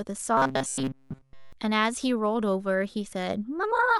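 From 0.37 to 1.53 s the voice turns into a rigid, metallic buzz pitched at 134 Hz that only loosely follows the speech. This is robotic sound from repeated short buffers, likely caused by playback starving and looping a slice of about 7.5 ms throughout the stretch while fresh audio is skipped.

At 2.02 s a brief glitch breaks through, peaking around -30 dBFS. This is a corrupt frame decoded: damaged bits across a few compressed frames were played anyway, so misread values put energy at the wrong frequencies.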